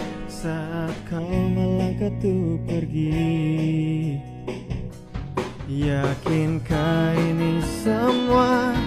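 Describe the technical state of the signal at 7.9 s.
At 7.9 s the signal is intact, with no audible fault at that moment.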